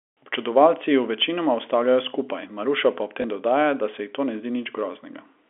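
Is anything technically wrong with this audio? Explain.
Yes. At 3.22 s there is packet loss with the last packet repeated. About 20 ms of audio, which fits a single lost packet, was replaced by a replay of the previous one. The replay is unlikely to line up with the pitch cycle, and the single repeat sounds like a small blip. The speech is carried in G.711 telephone coding, band-limited to roughly 300 Hz to 3.4 kHz.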